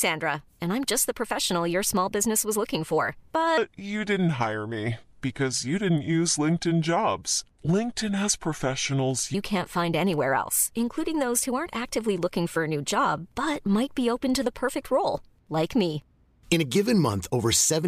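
After "business was looking for", 3.58 to 9.34 s plays as a section at the wrong speed, about 0.74 times normal, roughly five semitones lower, deep and dragging, likely a clock mismatch.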